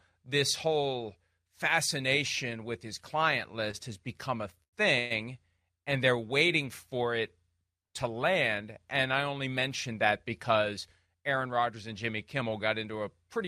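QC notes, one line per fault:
3.71 s and 4.63 to 4.75 s, short stall from a late packet: just before "has become a" the sound is held for about 20 ms, and again after it for about 96 ms, each time with a slight buzz or dip where the receiver stretched the last sound. A packet had not arrived on time, the jitter buffer ran dry, and playback resumed from the same point once it came in, so nothing is lost but the sound lingers unnaturally.
4.99 to 5.12 s, call audio freeze: shortly after "has become a" the sound stops moving forward for about 116 ms and is continued as a fading buzz or hiss rather than dropping to silence. The likely cause is packets held up in transit, emptying the jitter buffer so the receiver had to fill the wait. When they arrived the audio picked up where it left off, adding a gap while dropping nothing.
11.06 to 12.43 s, jitter buffer speed-up: across this stretch the speech runs about 7% fast at an unchanged pitch and sounds hurried. 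The jitter buffer was holding more audio than its target, so to cut the delay the receiver repeatedly removed short pieces one or a few pitch periods long, roughly a tenth of a second in total, compressing the timing without shifting the pitch.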